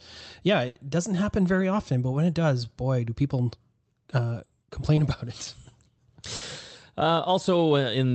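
At 0.67 to 0.77 s there's a burst of packet loss. About 80 ms of audio never arrived in time, so the receiver stretched the last sound and faded it down into a held buzz or hiss. Playback then picks up further along, with that stretch simply gone.

Around 4.95 to 4.99 s comes a short concealed packet loss. A couple of hundredths of a second went missing, and the decoder papered over it by continuing the preceding sound before blending back in, so you get a quick smear or wobble rather than a clean gap.

At 6.35 to 6.43 s there's a second burst of packet loss, about 60 ms this time. It's the same pattern: the last sound is held and dimmed, then the audio jumps ahead past the lost piece. All of this rides on the Opus call path, whose top end stops around 8 kHz, consistent with a wideband setting.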